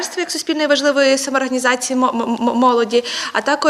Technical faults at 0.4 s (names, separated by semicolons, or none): none